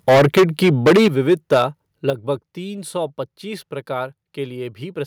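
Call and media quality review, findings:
Microphone overload, 0.08–1.62 s: harsh crackle on speech peaks, tops flattened, roughly 15% of samples clipped, peaks driven about 13 dB past converter full scale. Likely cause: mic input gain set too high ahead of the ADC, so loud syllables hit the ceiling and get squared off.

Microphone volume stepped down at 0.09 s (about 2 dB), 1.08 s (about 9 dB) and 2.1 s (about 8 dB, just before "तीन सौ पच्चीस"): sudden single-step level drops, speech and background together. Likely cause: call software auto-gain reacting to the clipping by cutting device input volume.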